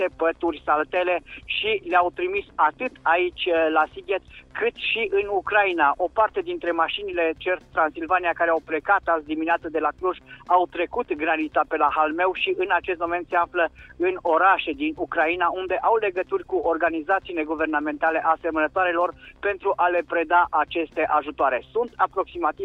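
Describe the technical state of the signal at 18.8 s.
At 18.8 s the rate doubling from 24 kHz to 48 kHz by straight-line interpolation, running from 6.23 s to the end, leaves imaging from linear upsampling: a dulled top and faint mirrored energy at 12 to 24 kHz, roughly 45 dB down, heard as a thin metallic shimmer.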